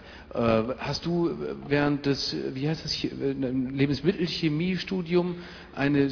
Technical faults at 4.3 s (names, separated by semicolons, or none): none